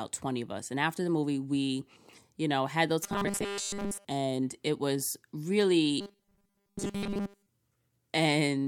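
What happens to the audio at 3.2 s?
At 3.2 s the speech breaks into robotic sound from repeated short buffers, running from about 3.04 to 4.05 s, between "you know had those" and "and it was". A steady 200 Hz metallic buzz replaces the natural voice, most likely because audio arrived too slowly and a 5 ms buffer was replayed for most of that second. Unlike a stutter, which repeats whole syllables, this fixed buzz keeps loosely tracking the words.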